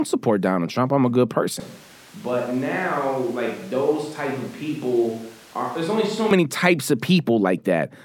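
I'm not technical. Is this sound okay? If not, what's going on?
No. Just after "I'm a good", at about 1.6 seconds, the voice suddenly sounds farther away: roomy and hollow, thinner in the low end, a bit quieter, with more background noise and room sound. At about 6.31 seconds, just before "types of", it snaps back to close and full. This is a switch to a distant microphone: the close microphone's signal likely dropped out, so that stretch came from a mic farther across the room.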